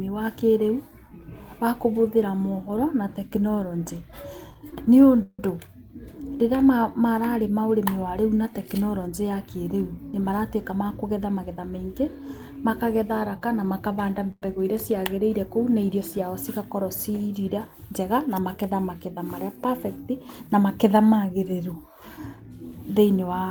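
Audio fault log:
4.51–5.40 s, repeated stalls (stutter): after "kũbũthĩra moboro na tekinoreonjĩ", four brief holds stretch the speech, the longest 165 ms. Unlike a single freeze, it drags in repeated hitches, with nothing lost.
10.71–12.20 s, jitter buffer speed-up: after "ya kĩrĩu nĩ maratuĩka", speech runs at 108% with pitch unchanged, as around a tenth of a second of pitch periods is trimmed to shrink the buffer's excess delay.
14.31–14.43 s, call audio freeze: after "kana makabanda", one 104 ms hold continues the last sound, fading into 30 ms of silence before resuming. It is a single isolated gap rather than a stutter, likely from packets held up in transit.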